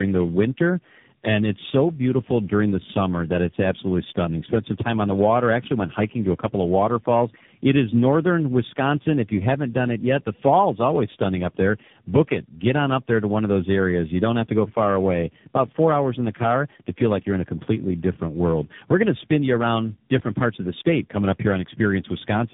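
Throughout, the speech shows tandem speech coding: it is rough, muffled and warbly, with nothing above 3.8 kHz, which fits roughly three speech coders in a row, each re-coding the previous one's errors. One low-rate codec alone would not stack this much roughness and smearing.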